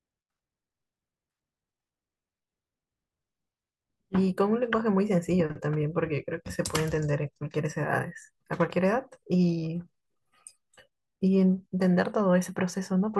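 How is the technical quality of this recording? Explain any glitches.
No glitches or dropouts turn up anywhere in this recording, so there is nothing to explain.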